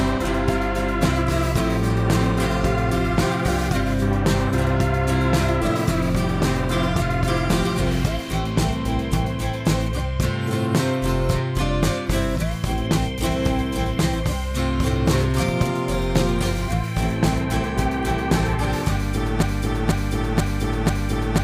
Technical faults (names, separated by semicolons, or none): broken-record loop